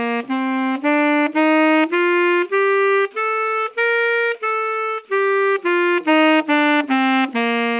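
No technical faults are audible.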